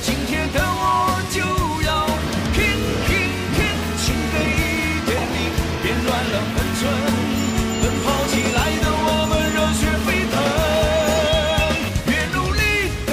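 Loudspeaker feedback squeal from 0.60 to 1.39 s: the microphone re-amplifies its own loudspeaker at 983 Hz, and that tone swells within a fraction of a second to sit about 5 dB above the sound.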